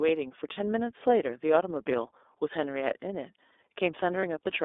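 Throughout, the speech carries iLBC codec coloration. The line band runs only from about 300 Hz to 3.6 kHz, and the plainly audible rough, slightly synthetic texture comes from coding each frame's excitation independently. This sounds grainier than the muffled but smooth sound of plain band-limiting. At 0.53 s and again at 4.2 s there are lost iLBC frames, each a single 30 ms gap. The decoder fills each gap by repeating the last pitch cycle with added noise, so you hear a brief held, buzzy vowel rather than a silent dropout or click. Because every frame stands alone, the speech sounds right again immediately after each gap.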